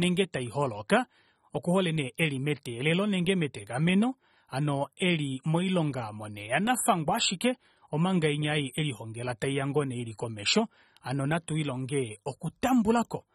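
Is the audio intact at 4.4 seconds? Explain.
No. At 4.4 seconds, as across the whole clip, the speech sounds dull and smeared, with a warbling, fizzy texture that is plainly audible on sibilants and held sounds, and nothing above about 13.8 kHz. This is likely AAC compression at a low rate, which fits roughly 24 kbps AAC-LC: the coder quantises each frame's spectrum to a hearing model, lowers the cut-off, and leaves gaps or noise-filled bands where detail was discarded.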